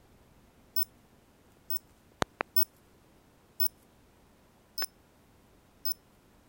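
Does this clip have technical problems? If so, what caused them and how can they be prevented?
Yes. There are loud pops, a double one from 2.22 to 2.43 s and a single one from 4.82 to 4.85 s, peaking about 20 and 15 dB above the sound. They are likely voltage pulses from a plug, switch or static discharge. Unlike a dropout, the sound carries on underneath. Secure connections and switch equipment on before recording to prevent them.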